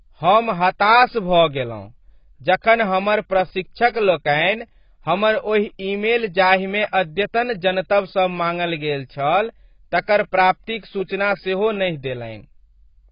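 From start to finish, the speech sounds dull and muffled. Nothing is present above 5.1 kHz, so sibilants lose their edge and air. Sustained sounds warble, and consonants carry a fizzy, smeared texture. Gaps open in the spectrum where detail should be. The likely cause is heavy AAC compression, consistent with AAC-LC at a low bitrate of about 16 kbps. With so few bits, the encoder lowered its cut-off and discarded or crudely filled many frequency bands.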